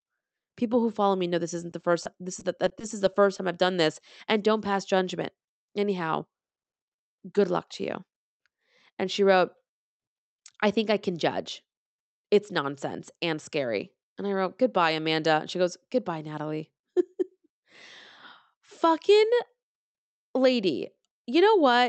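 Right after "follow me know this", from 1.57 to 3.39 s, there's repeated packet loss (robotic sound): a dozen-plus tiny holes, none longer than 20 ms, get patched by stretching the last sound, so it goes choppy with pieces missing until "I've done this and".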